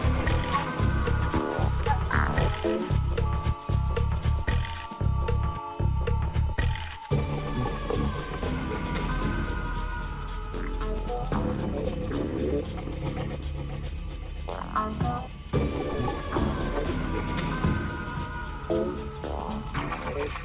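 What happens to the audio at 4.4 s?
Nothing goes wrong at 4.4 s; the audio plays through that moment intact, with no dropout, glitch or distortion.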